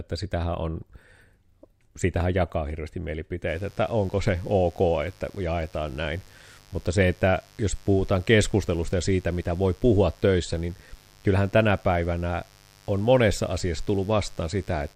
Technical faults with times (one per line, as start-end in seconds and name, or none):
3.46-14.96 mains buzz